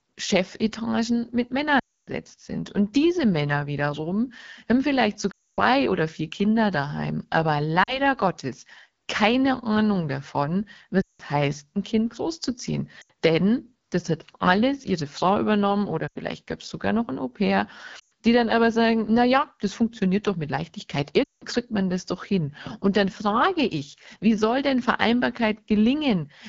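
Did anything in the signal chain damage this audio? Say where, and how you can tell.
Yes. The codec stage is the first problem. The speech was carried by the AMR wideband (HD Voice) codec at 8.85 kbit/s, one of its two lowest rates. At that rate the pulse-driven vocal tract model has too few bits to follow the voice closely. Across the whole clip the speech sounds rough and raspy, with a coarse, buzzy texture. The top band, from 6.4 to 7 kHz, is only shaped noise.

The second fault is lost AMR speech frames, introduced on the radio or network link. Frames failed their checksum, and the decoder filled each gap by repeating its last good pitch and vocal tract settings while lowering the gain. You hear this at 1.79–2.10 s, 5.31–5.60 s, 7.83–7.99 s, 11.01–11.22 s, 13.01–13.11 s, 16.07–16.17 s, 17.99–18.12 s and 21.23–21.43 s. The longer gaps, around 0.26 to 0.28 s at 1.79 and 5.31 s, drop to near silence within two frames. 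The shorter ones drop away just as quickly, and the speech returns briefly weak or rough after each.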